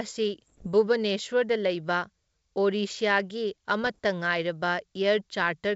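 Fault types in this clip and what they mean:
Bit errors on an ADPCM link: at 0.43 to 0.67 s and 3.82 to 3.99 s, bits in the G.722 wideband stream were flipped, at roughly half a percent in the first burst and a few tenths of a percent in the second. ADPCM codes each sample against an adaptive step size and a predicted value, so one wrong bit knocks both off. The damage rings on briefly as pops, rough bursts and sudden jumps in level.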